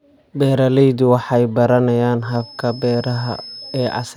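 A speech recording in which, just after "waxay baranayaan" at 2.17 s, a thin, steady whistle at 5.2 kHz appears and runs to the end, swelling and fading slowly in level and sitting well below the speech. This feedback whistle is likely a loudspeaker-to-microphone loop held right at the edge of feedback.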